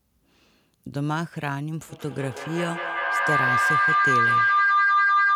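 From 1.89 s to the end, feedback howl builds as a microphone-to-loudspeaker loop gains level each pass, narrowing to a tone around 1 kHz that pulses roughly every fifth of a second and peaks about 7 dB above the speech. A spectrogram shows a bright, throbbing horizontal line.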